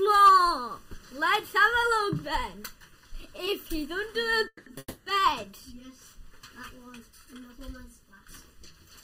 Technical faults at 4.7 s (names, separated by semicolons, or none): channel delay (comb filtering); call audio freeze